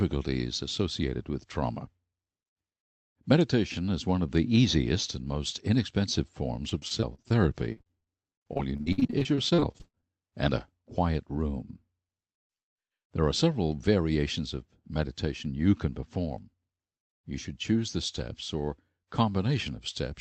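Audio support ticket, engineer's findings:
Repeated packet loss (robotic sound), two bursts: 6.69–7.32 s after "easiest and most inexpensive", then 7.72–10.34 s, ending before "and a quiet room". Choppy texture with pieces missing. About 27% and 30% of each span is concealed; the longest holes are 41 ms and 58 ms. The likely cause is the jitter buffer or network dropping packets, with the decoder repeating the last frame to fill each hole. On a spectrogram this shows as smeared, comb-like frame repeats with vertical seams. The waveform has short, recurring, copied-looking segments. The call codec's band edge sits near 8 kHz, which fits Opus at around 32 kbps.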